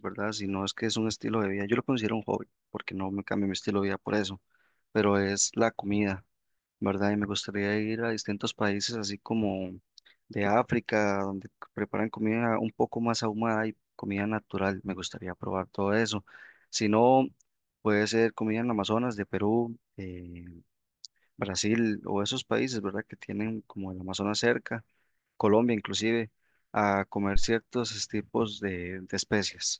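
Phantom power thump, 27.36 to 27.47 s: a supply switched on the live input steps through the coupling capacitors, a deep thump peaking about -13 dBFS, fading within 25 ms.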